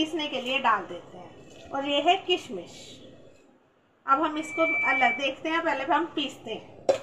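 Loudspeaker feedback squeal runs from 4.34 to 5.35 s. A microphone is picking up the loudspeaker it drives, and around 2.3 kHz the gain through that loop climbs above unity, so the tone feeds itself and grows on each pass. It swells over roughly a third of a second into a steady, piercing whistle that sits a few decibels above the rest of the sound. It holds for about a second before it ends.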